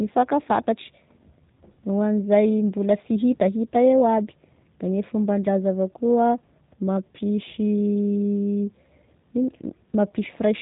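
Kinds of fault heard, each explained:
G.729 codec: the speech is rebuilt from a vocal tract model, a pitch predictor and sparse pulses, leaving a plainly rough, buzzy, synthetic edge that fits an 8 kbit/s stream. A spectrogram shows nothing above 3.8 kHz throughout, with smeared harmonics.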